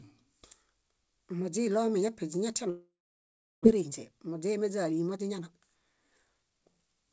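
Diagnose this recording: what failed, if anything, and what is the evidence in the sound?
Long network dropout, likely at the network stage: from 2.70 to 3.67 s a fading buzz gives way to a flat, near-empty waveform, and the lost audio never returns.

Jitter buffer speed-up: from 3.75 to 7.11 s the buffer trims pitch periods, running 9% fast at unchanged pitch. On a spectrogram, harmonics stay put while timing compresses.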